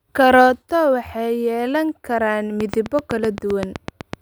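A speech clip, and right after "waxay yeelan karaan", from 2.61 s to 4.14 s, a train of clicks runs over the audio: about fifteen near-identical pops at a steady 7.85 per second, peaking around 15 dB above the speech and audible in the gaps too. On a waveform they show as evenly spaced spikes towering over the speech; a spectrogram shows thin full-height vertical lines. The likely cause is interference from nearby equipment or a faulty connection or power supply.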